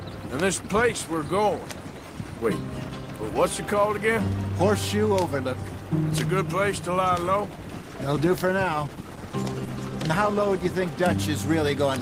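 At 7.82 s there's a call bitrate drop running to about 11.35 s. The bandwidth estimate fell, so the encoder coded more coarsely. The sound goes rough and watery, worst for roughly 2.7 s, which fits a fall from about 32 to 18 kbps.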